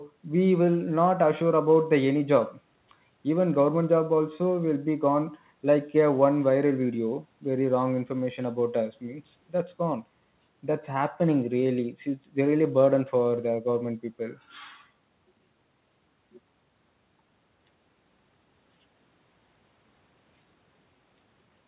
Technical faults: none

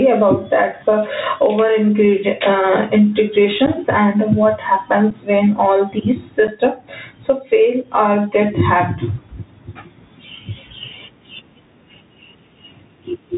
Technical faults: gain pumping; Bluetooth CVSD headset codec; unconcealed Bluetooth headset packet loss

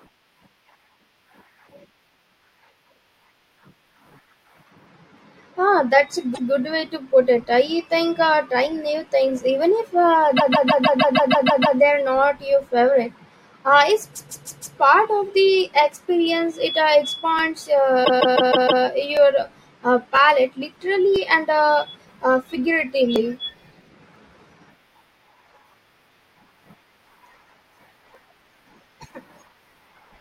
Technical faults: repeated frames; periodic USB or driver dropouts

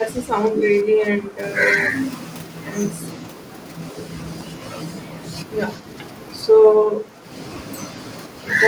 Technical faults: speech suppressed in double talk; hard clipping

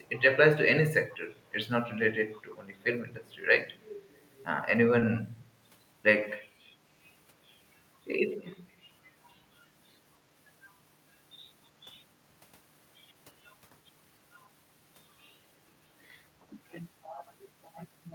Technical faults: echo leak; short concealed packet loss

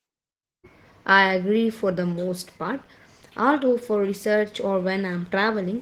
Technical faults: Opus voice compression

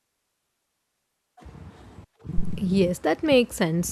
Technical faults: phantom power thump

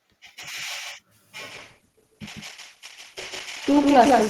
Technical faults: doubled audio track; adaptive stream at a lower bitrate

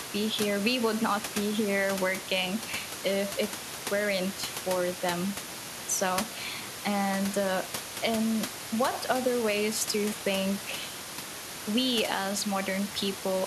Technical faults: none

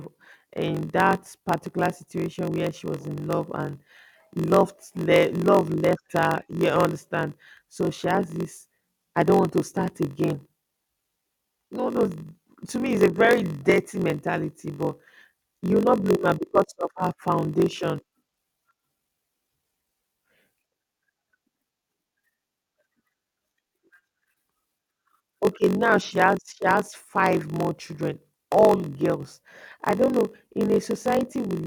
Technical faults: block size mismatch (padded)

